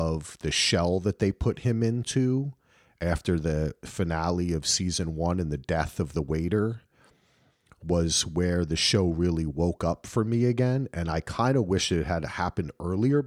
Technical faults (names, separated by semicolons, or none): none